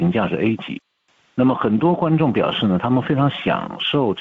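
Gain pumping runs through the whole clip, with the level swinging by roughly 5 dB. Loud and soft passages sit closer together than they should, so the sound comes across squashed and breathing. The likely cause is input gain set far too high, with a fast limiter or compressor clamping down on every peak. Nothing is heard above 8 kHz, consistent with a wideband call path at about 64 kbps.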